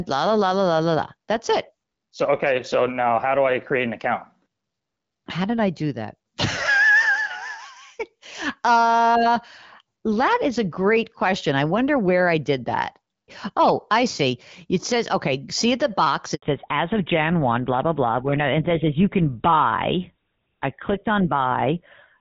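Just after "okay see the box", a handover gap at 16.34 to 16.42 s leaves 80 ms of silence; unlike a dropout, the speech fades quickly rather than clicking off. From 16.42 s to the end, a fallback to narrowband removes everything above 4 kHz. The speech turns duller and rougher than the light-artefact HD Voice sound before it, which fits a move to GSM full rate.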